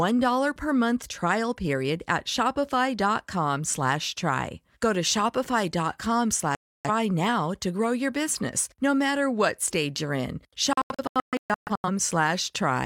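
At 6.55 s the speech cuts out until 6.90 s, a digital broadcast dropout: the receiver lost valid frames and muted, so about 0.3 s of programme is simply gone, appearing as a flat gap in the waveform and a blank vertical band on the spectrogram. From 10.73 to 11.89 s it recurs as scattered short holes, about 0.73 s lost in total, longest 128 ms, showing as a comb of silent slices interrupting the speech.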